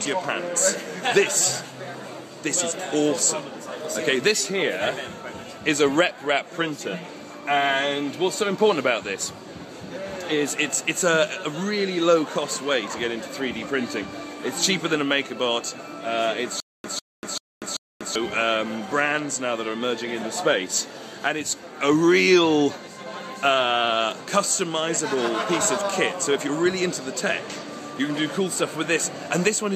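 A stutter with silent gaps runs from 16.60 to 18.15 s. A 147 ms burst of sound repeats four times, each followed by about 242 ms of silence, giving an even 388 ms cycle. The likely cause is a stalled player or stream that replayed its last fragment at each retry, so the audio due in that span is missing.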